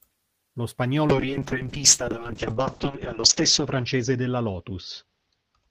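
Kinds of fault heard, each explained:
Call bitrate drop: From 1.08 s to the end, the speech turns rough and watery and loses its brightness. Nothing is heard above 8 kHz, where before it reached 20 kHz, and it never recovers within the clip. The call's bandwidth estimate fell and the encoder was told to code far more coarsely, trimming the top band. The sound fits a fall from around 32 kbps to about 6 kbps, held at its worst for about 2.1 s.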